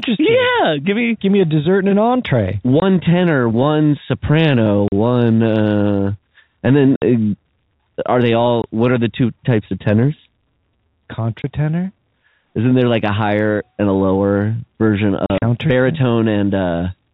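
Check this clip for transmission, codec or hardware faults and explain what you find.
The speech is repeatedly broken by short dead gaps from packet loss filled with silence, carried over a G.711 telephone-band link.

At 2.8 s, between "dessert and an entree" and "tenor one soprano", a 20 ms hole opens. Similar silences follow at 4.88 s (40 ms, just before "uh and"), 6.96 s (60 ms), 8.62 s and 11.42 s (20 ms each). After "and a lower version", from 15.26 to 15.42 s, broken gaps totalling 80 ms flutter the sound, the longest lasting 40 ms. The gaps are all multiples of 20 ms, which fits 20 ms packets going missing and the receiver playing silence instead, cutting the waveform abruptly.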